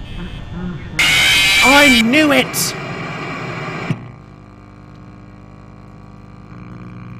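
Right from the start and all the way through there's mains hum, a steady 50 Hz drone from a ground loop or transformer, sitting roughly 25 dB under the sound.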